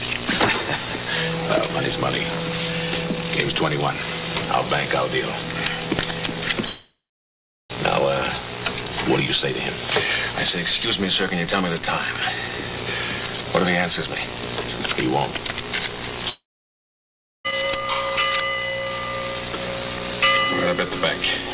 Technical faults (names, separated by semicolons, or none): long network dropout